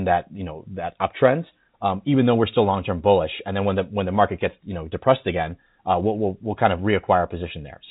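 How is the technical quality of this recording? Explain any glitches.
The technical quality of this recording shows no glitches to explain.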